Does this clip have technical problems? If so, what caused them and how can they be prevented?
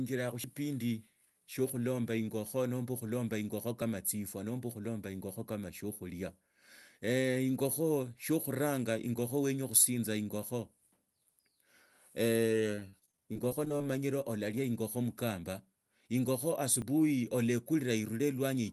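Yes. A dropped buffer (overrun) likely occurred at 0.44 s, 3.82 s and 16.82 s: the capture software fell behind, so about 40 ms, then about 20 ms twice, was overwritten and the speech jumps. Preventing it means giving the capture thread higher priority or larger buffers.

From 12.75 to 13.84 s, repeated packet loss (robotic sound) left about a dozen holes of up to 37 ms each, patched by stretching the previous sound, so roughly a fifth of that stretch is concealed and it sounds choppy. A larger jitter buffer, forward error correction or a steadier network connection would prevent it.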